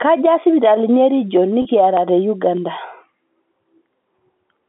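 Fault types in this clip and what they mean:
Clock drift buffer slips: About seven clicks land every 0.6 s, from 0.17 s to about 4.38 s, each a tiny jump where a handful of samples goes missing or doubles up. That steady spacing is the giveaway. It's likely two devices on separate clocks, drifting apart by something like 500 ppm, so the buffer between them creeps full or empty and has to slip to catch up.
Packet loss with pitch repetition: At 1.62 s there's a 30 ms gap, which fits about three lost packets. The receiver papered over it by repeating the last pitch cycle, so instead of a dropout you hear a brief held, slightly buzzy stretch before the speech picks up again. The gap is short enough that the patch never fades to silence, and it rides on the 200 Hz to 3.5 kHz telephone band of the G.711 line.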